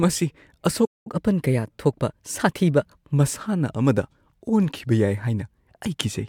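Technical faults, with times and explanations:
0.85 to 1.07 s, playback stall: the speech halts in mid-flow and the output falls completely silent for about 0.2 s, then picks up again. The likely cause is the player running dry of buffered data or its output thread being blocked. Unlike a packet dropout, which loses a short slice of audio and leaves a jump in the content, a stall is a pause in the output.
1.07 to 3.12 s, catch-up at higher speed: right after the stall the speech runs at 1.1 times normal speed for about two seconds, and because the backlog is sped up by resampling, pitch rises with tempo by roughly a semitone and a half. The voice sounds slightly hurried and higher, then settles back to normal at 3.12 s once the lost time is regained. Unlike time-stretching, the pitch is not held, and unlike wow, the change is a single steady plateau instead of a wavering drift.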